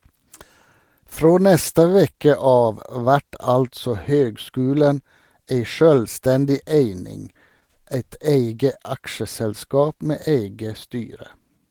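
Speech, carrying clock drift between sender and receiver throughout: the sending clock runs roughly 2% slow, so the receiver's jitter buffer keeps draining and must pad the stream. On a waveform this appears as scattered, unevenly spaced seams rather than one obvious break. Those seams are the repeated timing corrections from 1.0 s to 11.59 s, where short repeated slices slow the audio to about 99% speed and add something like 150 ms overall. Each is small, heard if at all as faint hiccups or a slightly unsteady tempo, and a spectrogram shows brief duplicated slivers at irregular points. At 2.10 to 2.15 s there is a short stall from a late packet: the buffer ran empty, so the last sound was held for 29 ms until the data arrived. Nothing is lost, but that sound drags with a slight buzz or dip, visible as a flat, smeared band in the spectrogram.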